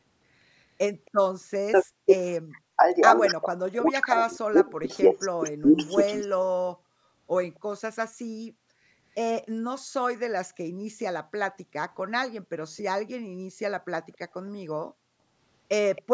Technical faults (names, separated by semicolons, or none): echo leak; speech suppressed in double talk